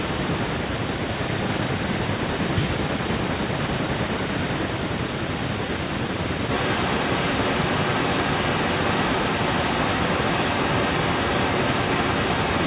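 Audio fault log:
6.5–12.66 s, echo leak: the far end likely played the call on a loudspeaker and its echo canceller failed to remove the microphone's pickup, so a copy of the speech returns about 0.95 s late, roughly as loud as the original, overlapping it.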